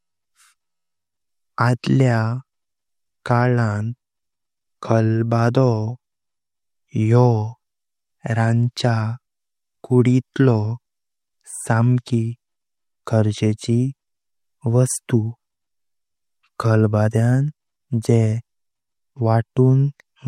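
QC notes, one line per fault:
Nothing stood out on listening to the speech.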